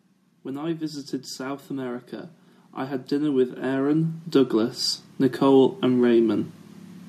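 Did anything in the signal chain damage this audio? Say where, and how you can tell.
Yes, in the call processing stage: automatic gain rising. From 1.67 s to 4.84 s the whole sound, speech and background together, swells up by about 11 dB. The AGC judged the input too quiet and ramped its gain up slowly over those three seconds.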